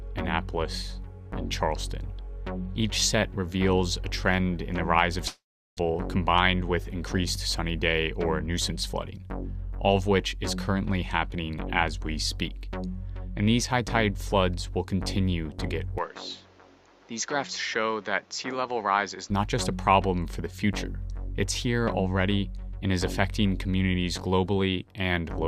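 At 5.27 s the audio breaks off in what is likely a long network dropout. The last sound is stretched into a fading buzz, then roughly 380 ms of silence follows before the audio resumes at 5.79 s, with about 400 ms of material gone for good. On a waveform the envelope decays smoothly into a flat line. On a spectrogram the final spectrum smears horizontally and then goes blank until the signal returns.

From 6.61 s to 9.11 s a jitter buffer speed-up follows. Having fallen about a tenth of a second further behind after the gap, the receiver trims many tiny pitch-period slices to catch up. Playback runs at about 104 % while the pitch stays the same. The waveform shows repeated periods missing, and on a spectrogram the events sit slightly closer together with unchanged harmonic spacing.

From 15.98 s to 19.30 s the input likely switched to a poorer device, with no silence at the change. Everything above 7.6 kHz vanishes, the level drops by about 5 dB, and a new noise floor appears about 30 dB below the signal, making the sound duller and boxier. 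On a spectrogram the upper band goes abruptly empty across the whole stretch and fills again at 19.30 s. The waveform's envelope shrinks slightly over the same span.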